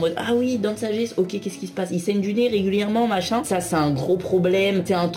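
Sample clock jitter runs through the whole clip. The converter's timing wanders by a few microseconds from one sample to the next, so each value is captured at a slightly wrong instant. That produces an error that grows wherever the waveform changes quickly. The result is a grainy hiss sitting around 30 dB below the signal. It thickens on loud, bright sounds and falls away completely in silence.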